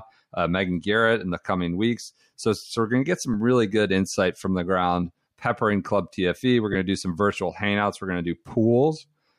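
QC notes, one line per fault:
3.34 s and 6.73–6.75 s, lost LE Audio frames: the Bluetooth link dropped audio, once for about 7.5 ms between "we're going to get" and "really good insight from", and once for about 22.5 ms just before "to do some virtual". Each gap fits whole 7.5 ms frames. The decoder filled each gap with the previous spectrum with randomised signs, heard as a brief grainy smear.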